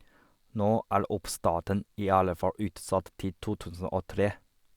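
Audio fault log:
Nothing in this speech recording stood out as a problem on listening.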